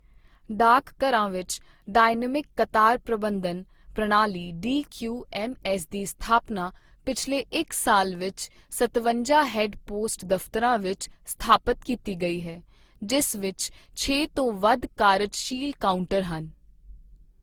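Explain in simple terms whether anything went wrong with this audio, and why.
Generation loss runs through the whole clip, from start to finish. The speech sounds swirly, smeared and hollow, and the starts of sounds are blurred rather than crisp. This most likely comes from the recording being compressed, unpacked and compressed again many times over. The damage fits roughly seven rounds with an Opus-style codec. Each round throws away slightly different detail, so the small losses pile up into this washed-out, watery quality.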